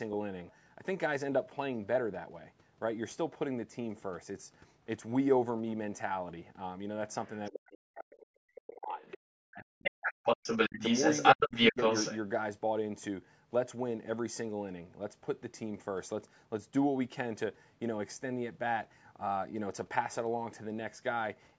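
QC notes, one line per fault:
7.25–7.71 s, 9.01–9.18 s and 9.83–12.19 s, other side's voice leaking through: a second talker sits under the speech, faint at first, well below the main voice, then louder, and by the long stretch from 9.83 s it is as loud as the main talker or louder. This is likely loudspeaker echo that the canceller failed to remove.
7.51–9.01 s, 9.4–10.2 s, 10.69–10.81 s and 11.36–11.78 s, speech suppressed in double talk: the main voice drops deeply, close to silence in the first two spans, with shallower dips near 10.7 s and 11.4 s. The likely cause is the echo canceller ducking everything while the other side speaks over it.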